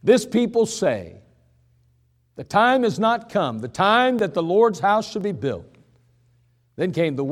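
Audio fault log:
4.19 s and 5.21 s, dropped buffer (overrun): two jumps in the speech, the first right after "not come the time" going into "that the", the second just ahead of "be built". Each time the audio jumps forward rather than pausing, with roughly ten milliseconds gone and the two edges butted together. That is most likely the program falling behind the hardware, so a buffer got overwritten before it was read.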